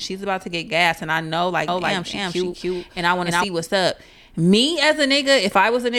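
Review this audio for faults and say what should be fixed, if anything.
A doubled audio track runs from 1.68 s to 3.44 s, between "gas and I know" and "what's up". A second full-band copy of the speech trails the original by about 300 ms at roughly equal level, with no decay or room colour, and it cuts in and out abruptly. The likely cause is the same signal reaching the mix twice, through a slower monitoring or capture path or an overlapping edit. To prevent it, route each source to the recording bus only once and check edits for stacked regions.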